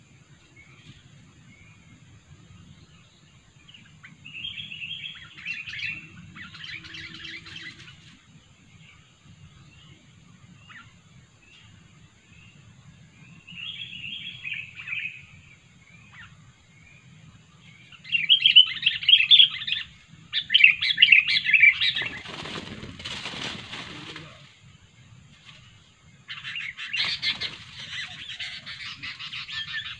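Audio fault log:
No faults detected in this recording.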